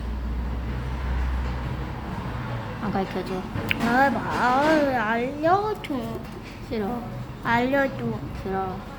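No technical faults can be heard anywhere in this recording.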